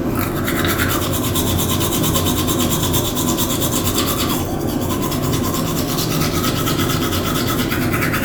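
No technical faults can be heard anywhere in this recording of sounds.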